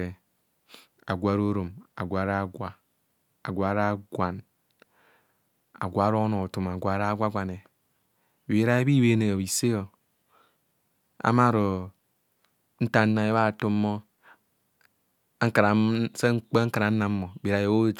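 Nothing here needs flagging, as the speech runs along without a single technical hiccup to point out.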